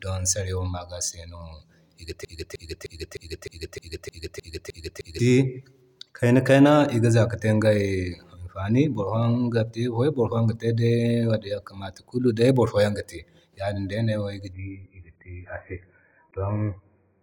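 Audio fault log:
2.25–5.19 s, broken-record loop: a 307 ms fragment repeats exactly, ten times back to back. Playback likely stalled, so the audio for that stretch is lost.
14.53–17.23 s, adaptive stream at a lower bitrate: quality drops suddenly, with no gap. Nothing remains above 2.5 kHz and codec artefacts rise, which fits a much lower-bitrate version.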